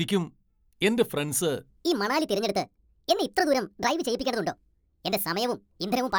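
At 1.70 s, right after "എന്റെ ഫ്രണ്ട്സ്", the speech jumps into a section at the wrong speed that runs to the end. Playback runs 1.51 times too fast, raising pitch about seven semitones, so the voice sounds hurried and chipmunk-like, likely from resampling against a mismatched clock.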